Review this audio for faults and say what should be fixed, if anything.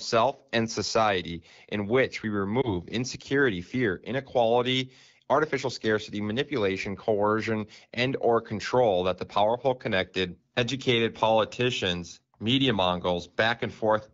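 A lost AMR speech frame at 2.61 to 2.70 s, just after "society in which we" and before "insecurity fear inequality artificial", sounds like a brief warble and dip, which points to about 20 ms of audio lost in a single frame. The frame failed its checksum, so the decoder replayed the previous pitch and vocal-tract settings at reduced gain. On a spectrogram, the harmonics smear flat and fade slightly before normal detail resumes. On the waveform, there is a short amplitude sag. Stronger channel coding or a better radio link would keep frames from failing their checksums.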